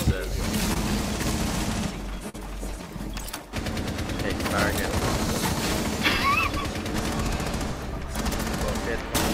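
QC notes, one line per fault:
0.73–0.77 s and 2.29–2.36 s, short concealed packet loss: two brief smears where the sound wobbles, then rejoins. About 20 ms and then 40 ms of audio arrived too late to decode, so the receiver stretched the preceding sound across each gap before blending back.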